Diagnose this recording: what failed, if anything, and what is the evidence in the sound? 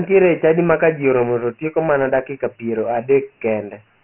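The speech sounds dull and gritty throughout, with a rough hiss riding every syllable and nothing above about 2.9 kHz, inside a phone-line band from 150 Hz. The codec stage is at fault: heavy Dialogic VOX ADPCM damage, which fits 4-bit samples at 6,000 per second, about 24 kbps.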